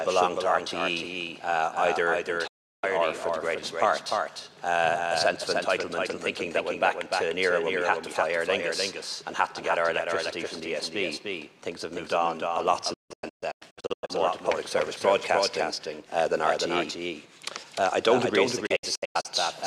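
Throughout, a doubled audio track sits under everything: a dry copy trailing by roughly 300 ms at about 5 dB lower. It is likely from a second, slower capture path. Unlike an echo or reverb, it never decays.

Digital broadcast dropout mutes the sound from 2.47 to 2.84 s. It mutes it again in scattered holes from 12.94 to 14.10 s, the longest about 160 ms, and from 18.66 to 19.26 s, the longest about 96 ms. Each hole fades fully to silence within 8 ms, and the missing material is lost rather than skipped over.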